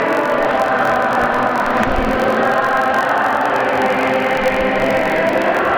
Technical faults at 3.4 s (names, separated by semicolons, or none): filter restarted on every block